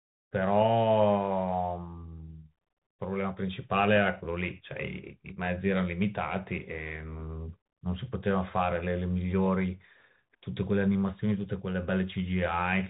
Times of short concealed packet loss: none

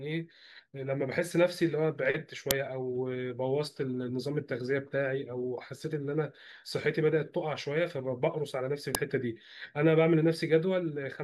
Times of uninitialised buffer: 2.51, 8.95

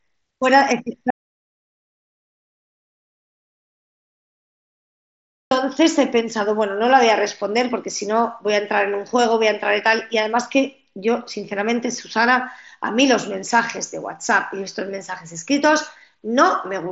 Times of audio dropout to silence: 1.10-5.51

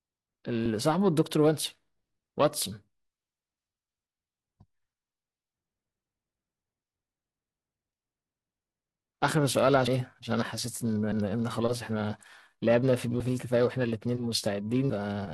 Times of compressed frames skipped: 9.87, 11.12, 13.20

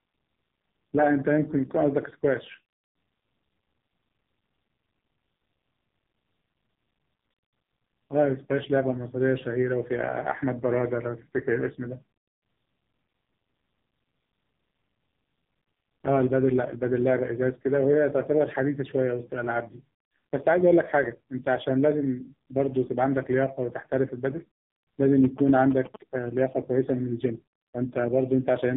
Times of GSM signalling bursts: 25.24-25.96

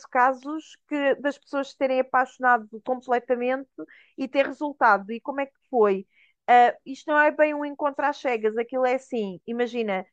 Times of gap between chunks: none

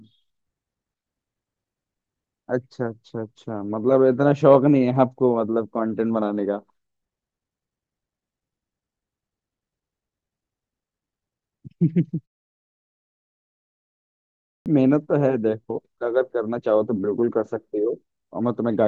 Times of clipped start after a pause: 14.14-14.66

